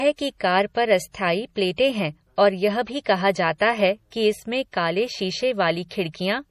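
From the start the whole speech track has a watery, swirly quality, with the top end sheared off cleanly so nothing sits above 15.1 kHz. That's MP3 compression, likely at a starved bitrate around 40 kbps. The encoder runs out of bits, chops the treble at a fixed point, and drops quieter frequency lines that then flicker in and out between frames. S sounds get that metallic chirp, and consonant attacks lose their edge.

Then there's pre-echo at about 3.04 s, 3.58 to 3.60 s just before "है कि इसमें काले", 4.10 s just before "कि इसमें काले", and 5.89 to 5.91 s. Each time a sharp onset lands late in a codec block, and the noise sized for the loud part spills into the quiet gap ahead of it. You hear a brief hiss lasting roughly 16 to 23 ms, and then the attack arrives sounding soft and smeared.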